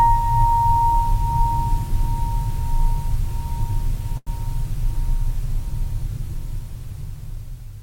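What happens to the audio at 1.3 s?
Nothing goes wrong at 1.3 s; the music plays through that moment intact, with no dropout, click or other fault to be heard.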